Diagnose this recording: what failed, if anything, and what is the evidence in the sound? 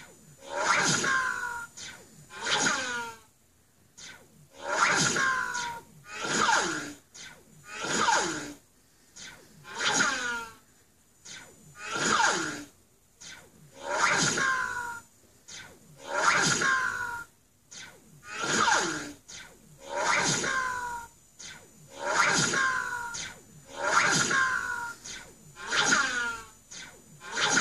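Nothing failed; no fault is audible anywhere.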